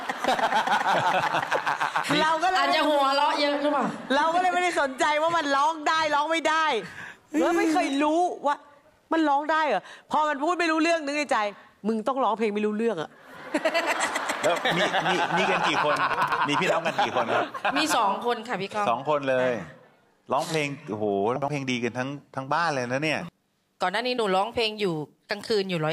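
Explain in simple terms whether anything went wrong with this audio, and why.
At 16.14 to 16.38 s and again at 21.36 to 21.48 s the sound briefly jumbles. These are chunks out of order: a 60 ms piece plays late, three pieces late the first time and one the second, so the sound is shuffled and has hard joins.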